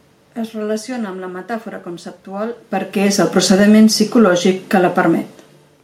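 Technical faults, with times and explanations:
2.95–3.89 s, automatic gain falling: after "amb la metàfora conceptual" the speech and the room noise behind it sink together by about 6 dB until "psicològic que". The automatic gain control judged the input too loud, or its background noise too strong, and lowered its gain gradually.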